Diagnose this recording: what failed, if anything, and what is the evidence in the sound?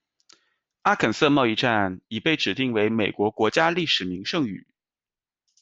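Converter stage, periodic clock jitter: from 2.66 s, after "站已被指", a clock wobble around 100 Hz puts sidebands on the speech, giving it a rough, metallic edge.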